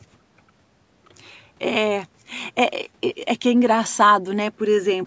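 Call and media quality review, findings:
Nothing stood out on listening to the speech, which carries the normal band limiting and low-cut of call microphone processing.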